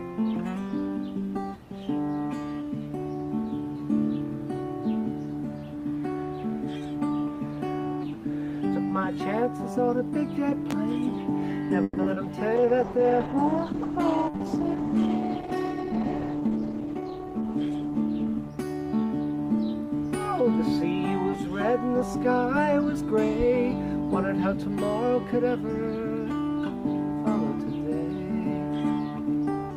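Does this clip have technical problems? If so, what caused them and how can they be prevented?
Yes. A voltage spike, likely from a plug, switch, static or driver glitch, put a single sharp pop on top of the sound at 10.71–10.74 s, about 15 dB above the signal, and another at 23.40–23.44 s, about 10 dB above. Secure connectors, ground equipment, and avoid switching or plugging devices while recording.

Repeated packet loss, with four gaps between 11.83 and 12.18 s and the longest 130 ms, forced concealment that stretched earlier sound over roughly half that span. This made the sound choppy and robotic. A steadier network path, wired rather than wireless where possible, and forward error correction reduce such losses.

A jitter buffer slow-down followed at 12.49–12.67 s. The receiver repeated small pieces to rebuild its reserve, adding 39 ms and playing the sound at 83% speed without changing pitch. 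A more stable connection keeps the buffer from draining.

A call bitrate drop from 32 to 11 kbps ran from 12.58 to 20.18 s, staying at the lowest rate for about 4.9 s. The coarser coding left the sound rough and dulled in the highs. Adequate, uncontested bandwidth keeps the encoder's rate up.

A jitter buffer speed-up at 15.48–17.00 s trimmed about 100 ms of surplus delay. The sound ran at 107% speed with the same pitch and came across slightly hurried. Avoiding delayed packets that arrive in bursts keeps the buffer near its target.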